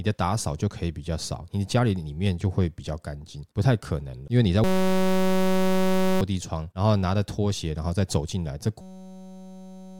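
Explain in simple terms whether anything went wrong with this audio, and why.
Twice the speech freezes into a steady buzz: from 4.64 to 6.21 s, and again from 8.81 s to the end at 9.99 s. This is a system hang loop. The computer stalled while the sound hardware kept replaying one tiny 5.33 ms scrap of audio, about 188 times a second, which fits a 256-sample buffer. Unlike a hum or interference, the buzz replaces the speech instead of sitting under it, and roughly a second and a half, then about a second, of speech is simply gone.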